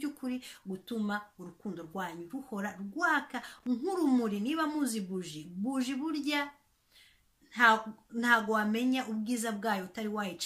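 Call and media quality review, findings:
Loose connector crackle, 3.42 to 3.67 s. Irregular burst of scratchy crackle lasting about a quarter second. Probable component: worn or dirty contact in a cable plug or jack. Mechanism: contact briefly moved, making and breaking many times, chopping the audio. Any DC on the line adds pops at each break. Action: reseat or replace the connector, then clean the contacts.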